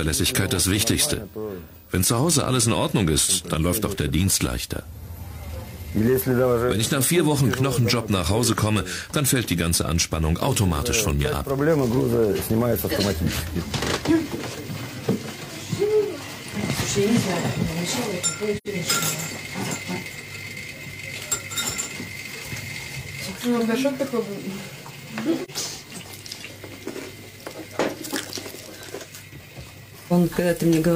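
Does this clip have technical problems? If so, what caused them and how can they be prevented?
Yes. AAC frame loss with muting leaves a soft-edged silent hole at 18.57–18.67 s (85 ms, which fits two lost frames) and a brief dip at 25.44–25.50 s (43 ms, which fits one frame). The decoder zeroes the missing spectrum, and the overlapping windows fade the sound out and back in. Sending the stream over a reliable transport with retransmission or forward error correction prevents the lost frames.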